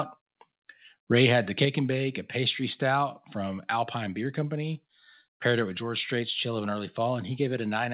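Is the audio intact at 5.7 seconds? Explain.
Yes, the audio is intact at 5.7 seconds, with only the narrow telephone-band sound of the call path, which carries nothing above 4 kHz.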